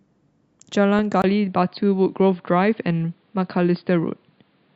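At 0.99 s there is a brief burst of DAB burbling. Weak reception let a small fraction of bit errors slip past the error correction into the MP2 audio data. Corrupted samples put short blips of noise in single sub-bands. The damage sounds spread over a few frames. It is heard as a few quick watery blips laid over the speech.

At 1.22 s the input switched to a poorer device, likely another microphone or a headset's call profile. There is a 20 ms silence at the switch. From then to the end, nothing is heard above 4.9 kHz, so the speech turns dull and boxy. The level stays about the same. A faint new background noise sits far below the speech.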